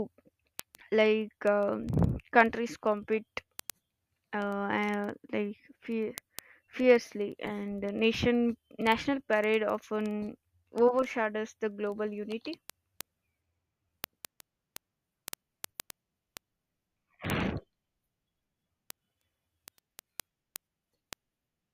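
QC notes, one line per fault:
0.13–21.70 s, word clock ticks: sharp ticks of uneven strength recur steadily about every 50 ms across the speech. Each is a single sample slipped between unlocked clocks roughly 400 ppm apart. Their strict, unbroken regularity and lack of gaps distinguish them from dropouts or random clicks.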